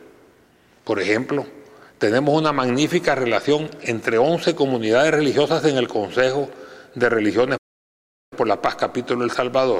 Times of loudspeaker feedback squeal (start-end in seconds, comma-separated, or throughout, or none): none